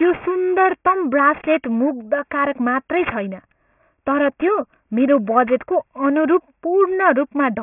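Throughout the speech, sibilants turn gritty and metallic, with false tones sitting roughly 20 dB below the speech and energy packed hard against 3 kHz. This is aliasing: the audio was downsampled, fitting a drop to about 6 kHz, without anti-alias filtering, so higher content folded back as wrong pitches.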